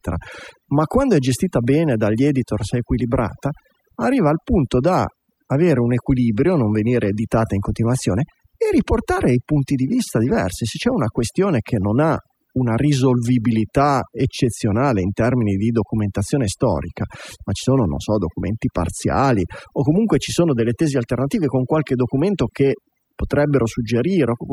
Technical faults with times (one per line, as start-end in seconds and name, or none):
0.00-24.52 overdone noise removal